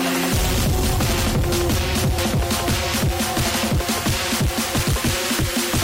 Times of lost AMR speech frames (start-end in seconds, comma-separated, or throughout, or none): none